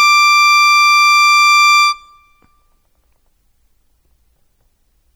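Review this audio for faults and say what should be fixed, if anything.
Throughout the music there is a watery, swirling quality, with metallic chirping on cymbals and sibilant sounds, and smeared attacks. This is likely MP3 compression, and the damage is plainly audible and fits a bitrate around 64 kbps. With so few bits to spend, the encoder zeroes weaker frequency lines that flicker on and off between frames, which produces the swirl and chirps. To prevent it, export from the original source at a much higher bitrate or in a lossless format.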